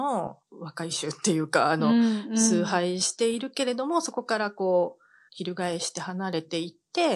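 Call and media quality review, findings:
Nothing to flag on this speech clip; no faults turned up anywhere in the recording.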